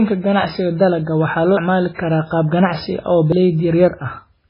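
Throughout the speech the sound is watery and dull, with nothing above 5.3 kHz, likely from heavy MP3 compression at a very low bitrate, around 16 kbps. Abrupt skips occur at 1.57 s, just after "waxaa loo", and at 3.32 s, each dropping roughly a third of a second. This is audio missing between chunks, probably lost while recording switched from one chunk to the next.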